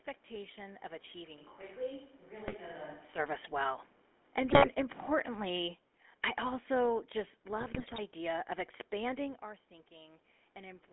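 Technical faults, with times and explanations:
Throughout: GSM full-rate codec. The sound has a buzzy, gravelly roughness and a narrow band of about 250 Hz to 3.4 kHz, which fits a 13 kbps GSM full-rate link. The pulse-driven vocal-tract model grinds steadily, unlike the brief bursts of bit errors.
1.39 to 3.18 s: switch to a distant microphone. The sound abruptly turns roomy and hollow, about 5 dB quieter, with less bass and faint room noise around 35 dB below it. The likely cause is a dropout of the close microphone. Unlike a talker leaning back, the change is instant both ways.
2.48 to 2.56 s, 4.50 to 4.74 s, and 7.60 to 7.99 s: GSM bit errors. Each burst breaks into squawks, pops and gargling, as corrupted filter, pitch and gain values warp the spectrum or spike the level. Unlike the constant codec roughness, these stand out as short, sudden eruptions.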